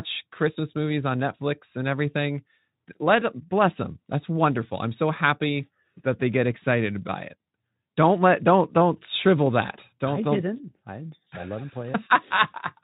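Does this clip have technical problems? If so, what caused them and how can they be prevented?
No, nothing here counts as a technical problem, since the speech simply comes through Speex coding at around 15 kbps working as it normally does, so there's nothing to trace back or prevent.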